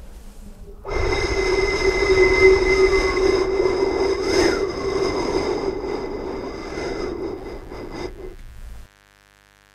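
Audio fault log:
7.38–9.75 s, mains buzz: a steady, raspy buzz comes in at 7.38 s and runs to the end of the clip, sitting roughly 35 dB below the sound. It is built on a 50 Hz mains supply. Sharp switching spikes, from a dimmer, a rectifier or a missing shield, get into the path twice in each cycle. That puts a dense row of 50 Hz harmonics up to several kHz, which is why it rasps rather than hums.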